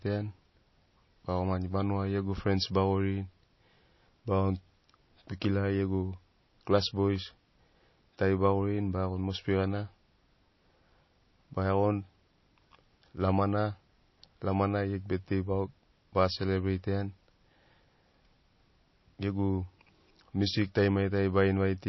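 Speech, carrying plainly audible MP3 compression across the whole clip: nothing is left above about 5.8 kHz, and the sound has a watery, swirling quality with smeared consonant onsets, which fits a low bitrate around 24 kbps, where the encoder likely drops the treble and toggles weak frequency components between frames.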